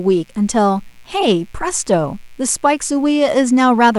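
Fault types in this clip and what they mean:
Mains buzz: a steady, raspy buzz runs under the speech for the whole clip, locked to a 60 Hz supply. The grit comes from sharp spikes leaking in twice per mains cycle, the sort of thing a dimmer, a rectifier or a missing shield lets through, so the harmonics stack up well into the kilohertz range. It sits quietly, around 40 dB below the speech.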